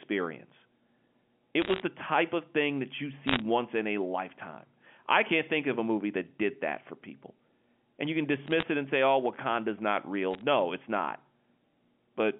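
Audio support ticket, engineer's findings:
Bit errors on a digital phone line: crackle bursts at 1.62–1.82, 3.27–3.42, 8.47–8.63 and 10.34–10.41 s. Flipped bits, well under 1%, each corrupt one G.711 sample. Speech runs unbroken, unlike packet-loss gaps.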